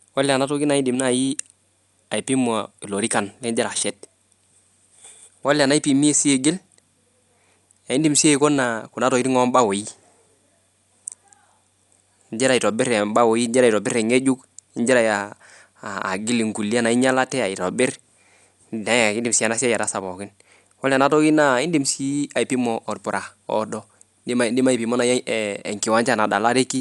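Speech runs for the whole clip with plainly audible codec damage, likely from Dolby Digital compression at a low bitrate, around 64 kbps. Nothing survives above 11.5 kHz, so the sound is dull, and a rough, fluttering noise hangs around tonal parts. That grainy fill, rather than the hollow, swirling gaps of MP3-style coding, comes from frequency lines given no mantissa bits being replaced with dither noise on decoding.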